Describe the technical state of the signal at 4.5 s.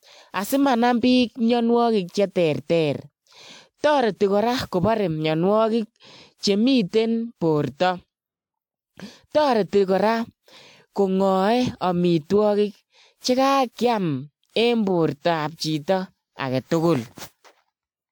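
At 4.5 s the speech carries generation loss, present throughout the clip. The likely cause is repeated lossy encoding, around seven passes of a codec whose character points to WMA 1 at about 128 kbit/s. Each decode and re-encode quantises the signal again on a shifted frame grid, so noise builds up. The result is a swirly, hollow, smeared tone with softened consonant attacks, while content still reaches to about 20.1 kHz.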